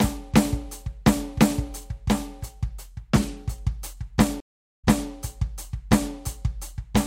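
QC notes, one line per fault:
4.40–5.09 s, stream reconnect: the music drops out for 377 ms as the connection breaks, then a fresh decoder picks up mid-stream and playback resumes about 313 ms earlier than where it stopped, so a short stretch of music repeats, as when a server resends a burst after reconnecting. On a waveform this is a flat gap ending in a restart; on a spectrogram, a blank vertical band followed by a repeated pattern.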